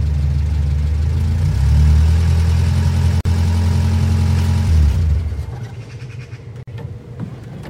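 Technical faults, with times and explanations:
3.21 s and 6.63 s: gap at a join of encoded pieces, each about 46 ms of silence cutting into continuous sound. Separately encoded segments were joined with their encoder start delay and final-frame padding left in, so the sound stops abruptly, with smeared edges, then resumes where it left off.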